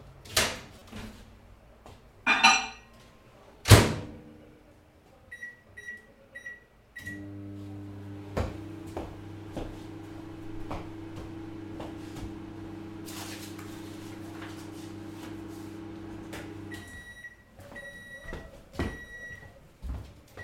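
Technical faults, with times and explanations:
0.79–0.82 s, corrupt frame decoded: a brief glitch, around 30 ms long and quiet at about -40 dBFS, sits on top of the sound and doesn't belong to it. Its length points to roughly two damaged frames. Bits inside the compressed data were flipped, and the decoder played those frames anyway. The misread gains and codes rebuilt energy at the wrong frequencies for the life of each frame, which is why it comes out as a short, out-of-place burst.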